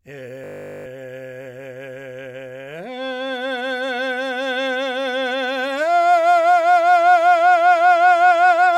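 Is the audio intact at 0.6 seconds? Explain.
No. A system hang loop covers 0.44 to 0.86 s: while the system is frozen, one 20 ms buffer repeats 21 times, a steady 50 Hz buzz.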